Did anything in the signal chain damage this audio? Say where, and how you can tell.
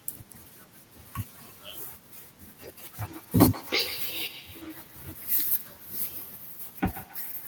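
Yes: a feedback echo between two devices runs from 2.97 s to the end of the speech clip at 7.48 s, a call-processing fault. Each word returns about 150 ms later, thinner and more ringing, peaking at about 17 dB below the speech. Two devices in one room share the call. One plays the other's audio, that microphone picks it up again, and neither echo canceller removes sound played by the other device.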